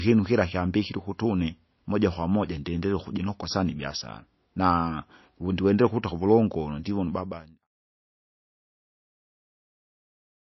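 From start to end, the speech is dull above 5.8 kHz, with plainly audible watery, swirling smear. The likely cause is heavy MP3 compression, at a bitrate that points to about 28 kbps. Starved of bits, the encoder cut the treble and dropped weak detail. The smooth fade-out from about 6.5 s to 7.68 s carries the same damage.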